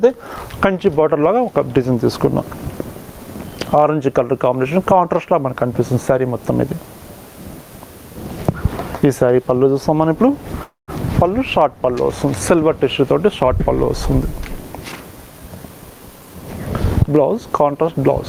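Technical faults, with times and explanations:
Throughout, gain pumping: the level is pulled down under each loud sound, swinging by roughly 15 dB. Loud and quiet passages end up pressed close together, so the whole clip sounds squashed and breathing. This is the likely result of input gain set far too high for the microphone, with a fast limiter or compressor pulling it back down each time a loud sound arrives and releasing it again afterwards.
10.63 to 10.91 s, call audio freeze: the sound stalls for about 0.28 s. The last sound carries on as a fading buzz or hiss, then about 150 ms of silence follows before the audio resumes exactly where it stopped, so nothing is lost and a pause of about 245 ms is inserted. The likely cause is packets held up in transit, which left the receiver's jitter buffer empty and made it fill the wait with a stretched-out version of the last sound.
14.73 to 16.43 s, jitter buffer speed-up: the audio runs about 11% fast while its pitch stays the same, so this stretch sounds hurried. 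The receiver's jitter buffer was holding more audio than its target, as happens after delayed packets arrive in a bunch. To bring the delay back down, the receiver cut out many short slices of one or a few pitch periods in quick succession, trimming roughly 0.2 s in total.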